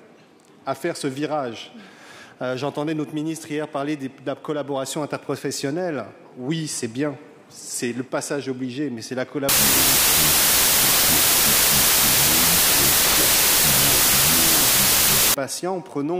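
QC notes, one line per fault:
9.49 to 15.34 s, wrong sample width. Audio written as 32-bit integers is read as 16-bit. Each sample splits into two values. Only the upper halves keep the signal's top bits. The lower halves become loud noise. The sound is buried in it, at half speed and an octave lower.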